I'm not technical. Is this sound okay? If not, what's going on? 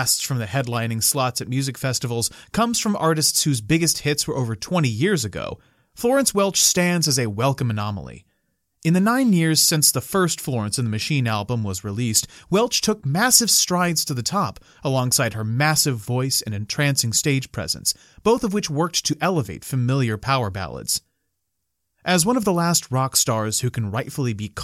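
Yes, nothing in this speech recording sounds wrong. I listened for technical problems and didn't hear any.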